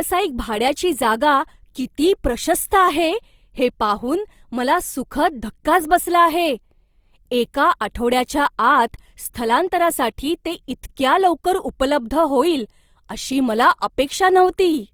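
From start to finish the speech carries a plainly audible grainy, rough texture, most likely from Opus compression in its music (CELT) mode at a low rate, one that fits roughly 24 kbps. The codec keeps each band's energy but runs short of bits, so it fills fine detail with noise or folded copies of lower bands. That is why it sounds rough rather than swirly like MP3, and why the bandwidth still reaches about 20.3 kHz instead of turning muffled.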